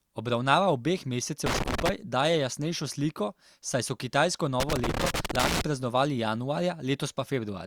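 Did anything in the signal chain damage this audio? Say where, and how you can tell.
Yes, analogue wiring: loose connector crackle, irregular scratchy bursts from 1.46 to 1.89 s and 4.60 to 5.61 s, right after "sliko saj so kitajsko", a worn contact chopping the signal.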